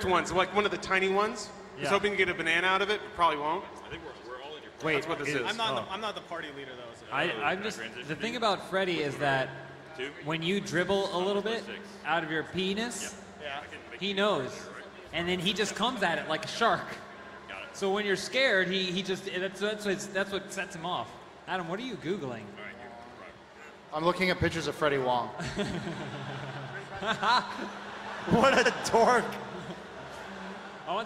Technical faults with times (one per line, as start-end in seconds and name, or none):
17.21-17.35 repeated frames
28.65-28.72 repeated frames